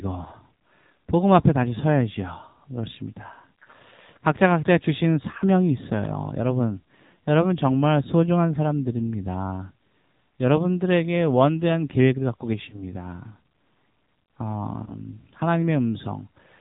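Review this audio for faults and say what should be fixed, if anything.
The whole clip carries plainly audible AMR narrowband mobile codec damage. Nothing above 4 kHz gets through, and the speech has a buzzy, synthetic edge because the vocal-tract model has very few bits to work with, which fits the 7.4 kbps mode. To avoid this, carry the call on a wideband codec or a higher AMR mode.

There are lost AMR speech frames at 12.70 to 12.84 s and 14.84 to 14.92 s. Each sounds like a single missing 20 ms frame. The decoder covers the gap by repeating the last pitch and spectral shape at falling gain, so you hear a short dip or warble, then the speech comes back a bit rough. Better radio coverage or stronger channel error protection would keep those frames intact.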